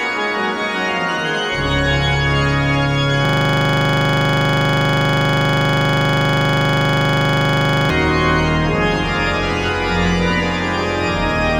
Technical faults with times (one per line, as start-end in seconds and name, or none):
3.25-7.90 system hang loop